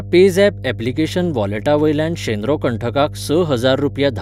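Mains hum runs under the speech for the whole clip: a steady 50 Hz tone with some low harmonics, sitting around 15 dB below the speech, from power-line coupling such as a ground loop. Unlike rumble, it holds one fixed pitch rather than a broad, shifting low noise.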